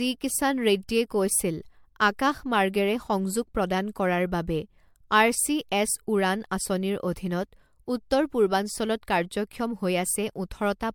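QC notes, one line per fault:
Throughout, generation loss: the speech sounds swirly, smeared and hollow, with soft, blurred consonant attacks and nothing above 19.8 kHz. It's likely been through MP3 around four times, consistent with roughly 96 kbit/s, each pass piling fresh quantisation noise and spectral holes onto the last.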